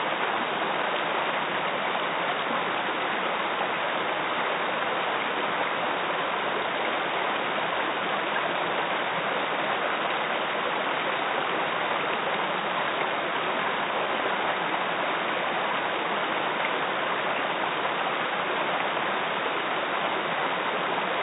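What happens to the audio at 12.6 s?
At 12.6 s the everyday sound carries on intact, with no dropout, glitch or other fault at that moment.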